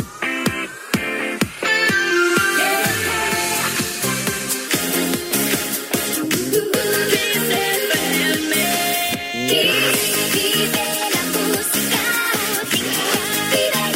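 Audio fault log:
Throughout: sample clock jitter. The converter's clock wobbles by a few microseconds, so samples land slightly off time and steep parts of the waveform come out wrong. You get a grainy hiss roughly 25 dB under the sound, thickest on loud, bright passages and gone in silence.
4.68 to 13.95 s: section at the wrong speed. From here to the end everything runs 1.19 times too fast, so pitch jumps up about three semitones and the timing turns hurried. Most likely the audio was played or resampled against the wrong clock rate.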